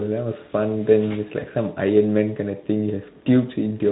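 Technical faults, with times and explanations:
1.39–1.46 s: VoIP packet loss concealed by the speech codec. A 20 ms gap, consistent with one lost frame, was bridged by extending the last pitch and filter at falling gain. This leaves a brief buzzy or noisy smear that stays weak until about 1.46 s while following frames rebuild. Spectrogram: flattened, fading harmonic band. Waveform: a shrinking, over-regular stretch.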